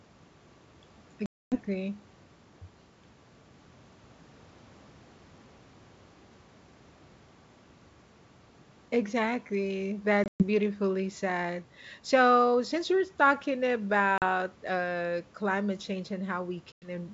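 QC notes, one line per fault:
1.26–1.57 s, 10.24–10.44 s, 14.18–14.23 s, 16.72–16.91 s: packet loss on an ADPCM call. Lost packets (260, 140, 40 and 100 ms) become hard-edged silences, and the decoder's predictor and step size drift from the sender's, so speech resumes with brief distortion.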